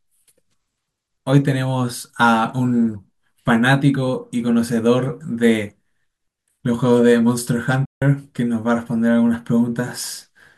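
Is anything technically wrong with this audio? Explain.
Yes. There is a digital broadcast dropout from 7.85 to 8.02 s. The receiver stopped getting frames it could decode and muted its output until valid data returned, so about 160 ms of the programme is simply missing, which fits roughly five lost frames. The speech fades out over about 3 ms into silence and then resumes. On a waveform this shows as a flat line. On a spectrogram it is a clean vertical blank band across all frequencies.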